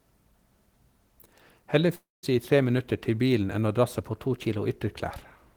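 From 1.95 to 2.25 s, the speech breaks off into a fading buzz and then about 180 ms of silence. This is likely a long network dropout, with roughly 280 ms of audio lost. On the waveform it appears as a flat gap after a decaying tail.

From 4.09 to 4.65 s, the audio runs about 5.2% fast and rises about 88 cents, nearly a semitone. The likely cause is a drift correction step. On a spectrogram, the harmonics step upward as a block.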